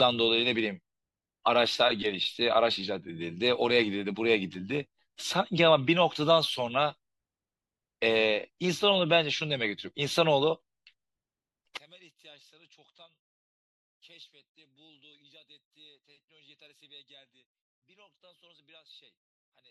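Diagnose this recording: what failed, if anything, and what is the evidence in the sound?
From 11.77 s to the end, the speech collapses by about 30 dB to a faint residue rather than silence. This is likely one channel inverted, perhaps a reversed wire pair, cancelling the centred voice in mono. Unlike a dropout, the difference signal persists.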